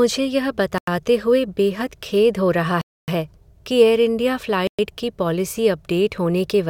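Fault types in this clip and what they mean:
Bluetooth stall: The speech cuts to dead silence three times, then carries on. The first gap runs 0.78 to 0.88 s, lasting 94 ms, just before "हुए बेहद खेद हो". The longest, 266 ms, runs 2.81 to 3.08 s, right after "बेहद खेद हो रहा". The third, 113 ms, sits at 4.67 to 4.79 s, between "कि एयरइंडिया" and "की पॉलिसी". The likely cause is delayed wireless packets draining the headphones' buffer, so playback halts until resent data arrives.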